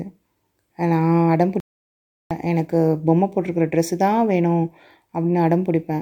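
A short speech recording with one clear problem: a playback stall. At 1.60 s the speech just stops dead in mid-flow and the output goes silent for about 0.71 s, picking up again at 2.31 s. It doesn't sound like a pause in the talking. It's more like the player was starved of data or its thread got blocked, most likely, and it simply had nothing to output until it caught up.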